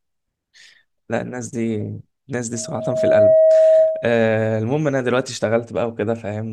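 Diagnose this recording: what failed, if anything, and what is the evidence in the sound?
Loudspeaker feedback squeal in the analogue acoustic path: from 2.53 s to 4.23 s a 637 Hz tone swells over roughly 0.7 s into a howl about 10 dB above the speech, as microphone-to-speaker loop gain exceeds one.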